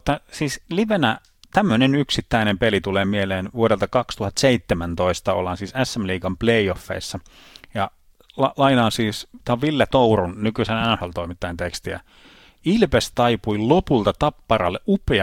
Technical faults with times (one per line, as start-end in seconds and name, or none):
1.69 compressed frames skipped
14.68 compressed frames skipped